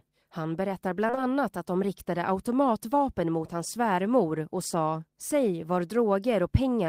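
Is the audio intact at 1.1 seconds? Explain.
No. Around 1.1 s there's short concealed packet loss, three back-to-back gaps running from about 1.07 to 1.19 s, each about 20 ms of the speech that never arrived in time. The receiver papered over each hole by extending the last bit of sound it had, then blended back into the real signal. You hear it as a quick smeary wobble just before "att de riktade automatvapen", where a brief sound may simply go missing.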